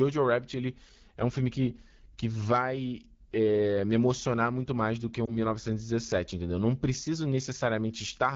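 Across the whole speech clip the AMR wideband (HD Voice) codec is plainly audible. The voice has a rough, raspy edge that fits one of the codec's two lowest rates, around 8.85 kbit/s. Below 6.4 kHz the sound is rebuilt from a pulse-driven vocal tract model, which at this rate leaves the harmonics grainy. On a spectrogram, detailed energy stops near 6.4 kHz, a band of smooth, featureless noise fills 6.4 to 7 kHz, and nothing appears above 7 kHz.

From 5.25 to 5.38 s, right after "muito mais do que", there are lost AMR speech frames. The short disturbance points to a single dropped 20 ms frame. The decoder covered the gap by repeating the last good pitch and vocal tract settings at falling gain, so the sound dips or warbles briefly, then returns weak or rough for a moment. The waveform shows a brief sag in the envelope. On a spectrogram the harmonics freeze and smear flat for a moment before resuming.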